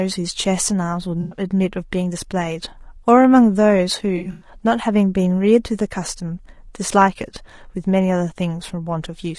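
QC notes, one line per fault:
Throughout, low-delay AAC compression: the speech sounds rough and grainy, with noise filling the gaps between harmonics and a thin, synthetic top end. That's likely AAC-ELD's short frames struggling at a low bitrate, with damage that fits roughly 32 kbps.
1.21–1.39 s and 4.17–4.49 s, AAC frame loss with concealment: the first patch loses about 100 ms and the second about 160 ms spread over 240 ms, with the longest gap about 100 ms. Both sound smeared, noisy and phasey where the decoder patched over missing frames using the last good spectrum.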